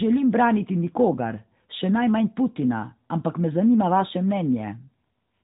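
Nothing stood out as a technical fault on listening to this speech clip.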